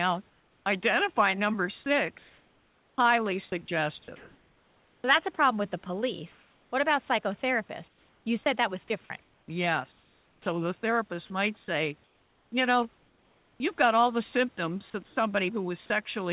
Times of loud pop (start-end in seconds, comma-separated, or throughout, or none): none